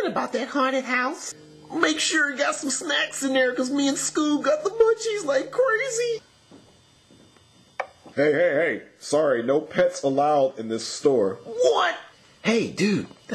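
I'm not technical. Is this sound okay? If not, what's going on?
Yes, this sound is okay, and there's nothing going on with it that needs fixing.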